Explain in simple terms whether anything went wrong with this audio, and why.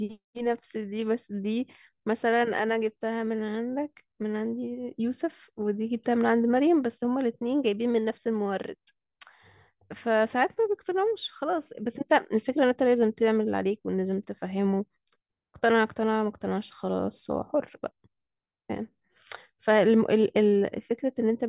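Nothing went wrong here; the speech sounds as it should.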